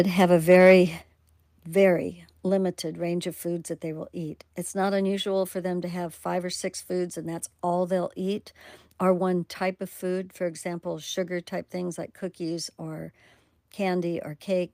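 From 0.5 to 0.74 s, right after "have a", there is microphone overload. The input was driven about 2 dB past what the converter could handle, so around 7 percent of the samples in that stretch lost their tops. This is most likely because the microphone's input volume was set too high. It sounds like a crackling, distorted edge on the loud syllables. On a waveform the peaks look flattened into plateaus. A spectrogram shows smeared energy spreading up through the high frequencies above the normal harmonics.

Then the microphone volume is stepped down twice. At 1.02 s the level of both voice and background falls abruptly by about 8 dB. At 2.49 s, just before "range of foods that", it drops again by about 3 dB. Each change is a single step, not a gradual fade. The likely cause is call software reacting to the overloaded input by lowering the device's gain. On a waveform the envelope shrinks at once at each of those times. 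A spectrogram shows everything, including the noise floor, becoming uniformly darker from that point on.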